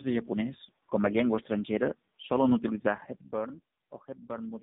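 From start to finish there's tandem speech coding: two low-rate codecs in a row, likely GSM full rate then AMR-NB, so it's rough, muffled, warbly, with nothing above 3.7 kHz.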